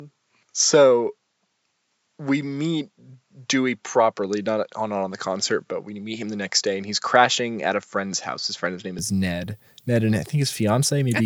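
From the start until 8.99 s the speech sounds dull and slightly boxy, with nothing above 7.6 kHz, so the air and crispness of sibilants is missing. There is a faint added noise floor far beneath the speech. At 8.99 s the full bandwidth returns abruptly, with no gap and no obvious jump in loudness. The likely cause is the input switched to a poorer device, a narrower-band microphone, before the system changed back to the original input.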